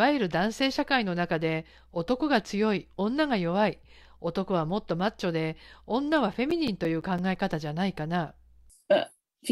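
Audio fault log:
6.00–7.69 s, CD scratch ticks: 11 regular ticks, longest around 10 ms; each disc turn, damage beyond error correction gets interpolated or muted.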